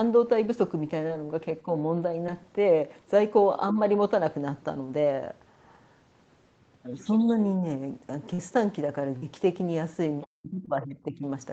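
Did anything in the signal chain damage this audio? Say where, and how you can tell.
Yes. At the network stage, short concealed packet loss shows up at 1.07, 2.27, 8.34, 9.18 and 10.66 s. Each is a brief smear, not silence. The first, second and fifth are roughly 20 ms holes. The two near 8.3 and 9.2 s are about 40 ms holes, so they are longer. The decoder extended the preceding sound and then crossfaded back, so there is no hard dropout.

Speech suppressed in double talk appears in the call processing. There is a shallow dip of about 5 dB around 1.65 to 1.69 s, then a deep one from 10.26 to 11.24 s, where the talker sinks by around 40 dB for about a second. The likely cause is the echo canceller ducking during overlapping speech. This is a level collapse rather than a pitch-held smear.

The other side's voice leaking through is audible from 10.21 to 10.26 s as a faint second voice about 20 dB under the talker. 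It likely comes from loudspeaker echo that the canceller left behind. Unlike steady crosstalk, it ends exactly as the suppression begins, which ties both faults to the same double-talk moment.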